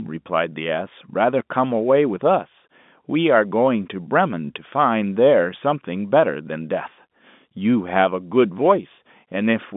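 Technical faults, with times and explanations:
Nothing stood out on listening to this telephone-band speech, which carries the narrow G.711 line sound with nothing above roughly 3.8 kHz.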